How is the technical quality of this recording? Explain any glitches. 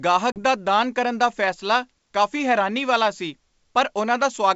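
One real glitch, early on, in a wideband G.722 call that sounds clear up to about 7 kHz at 64 kbit/s. Between 0.32 and 0.41 s there's packet loss on the ADPCM call. About 40 ms of audio, a couple of packets' worth, drops to a hard-edged silence. Because ADPCM codes each sample as a difference from a prediction, the decoder's predictor and step size lose track of the sender's during the gap. When the speech resumes at "ਦਾ ਦਾਨ ਕਰਨ ਦਾ", it comes back with a bit of distortion, settling within some tens of milliseconds.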